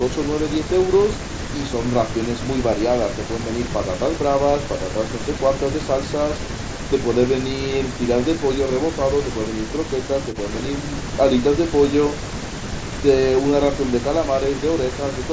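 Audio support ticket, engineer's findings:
No faults found: the speech is band-limited to 8 kHz, which fits the call microphone processing feeding a Bluetooth mSBC headset codec, with only the light codec grain expected of that path.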